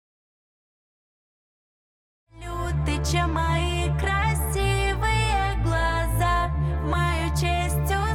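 No technical faults can be heard anywhere here.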